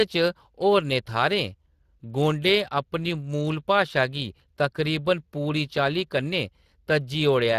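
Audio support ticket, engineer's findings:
Hoarse, noisy speech for the full clip, codec damage plainly audible, with the band above 8 kHz reduced to shaped noise-like hiss and nothing above 15.4 kHz. Component: Speex codec on the voice path. Mechanism: CELP coding with too few excitation bits, fitting a setting around 22.4 kbps.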